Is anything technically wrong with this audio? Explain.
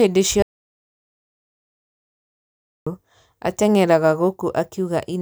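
Yes. From 0.42 to 2.87 s there is an audio dropout to silence, likely from the input being lost while the recorder kept writing zeros. The speech cuts off abruptly into about 2.44 s of dead digital silence with no room tone, then resumes mid-flow.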